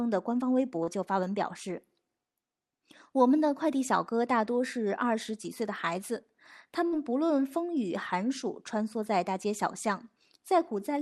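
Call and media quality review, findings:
Short concealed packet loss, 0.83–0.89 s: brief smear. Jitter buffer/decoder concealment continued the last sound for about 36 ms, with about 40 ms of audio missing. Spectrogram shows frozen, blurred content before blending back.

Burst of packet loss, 6.87–6.94 s: held sound fading out, then audio resumes with about 40 ms skipped. Concealment ran about 52 ms. Waveform shows the continued sound decaying in amplitude. Spectrogram shows frozen content dimming, energy capped near 12 kHz (Opus).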